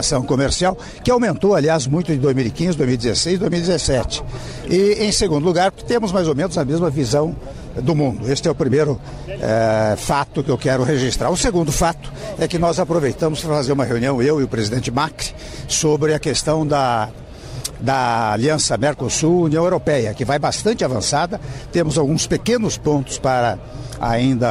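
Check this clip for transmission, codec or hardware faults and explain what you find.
No faults detected.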